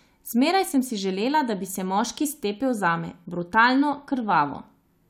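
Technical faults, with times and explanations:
No technical faults can be heard in this speech, so there are no times or explanations to give.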